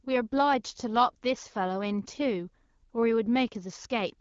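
No faults heard; the speech has the band-limited character of AMR wideband (HD Voice) coding, with nothing above 7.2 kHz, which fits the 12.65 kbit/s mode.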